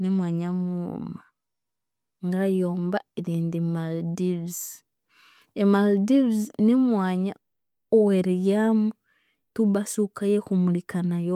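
No technical faults are audible.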